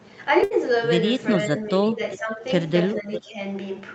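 Speech with a burst of packet loss at 0.43 to 0.53 s: about 71 ms of held, fading sound stands in for the lost audio, then speech resumes with roughly 80 ms missing, unlike a simple dropout. Speech suppressed in double talk, likely from an echo canceller ducking both talkers, pulls the voice down by up to about 15 dB across 1.51 to 2.01 s and by about 10 dB across 2.17 to 2.43 s and 2.94 to 3.39 s. Echo leak, likely from loudspeaker pickup, adds short copies of the voice at 2.11, 2.93 and 3.13 s, about 15 dB down and delayed by roughly 0.4 s, which sets them apart from room reverberation.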